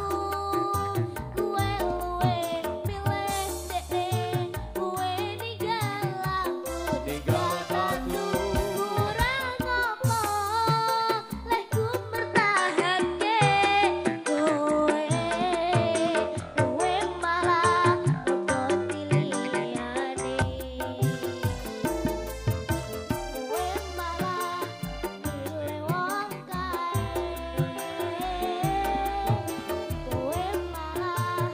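From 12.18 to 20.42 s the sound dulls, with nothing above 10.9 kHz. The level shifts and faint new noise appears. The input likely switched to a poorer device.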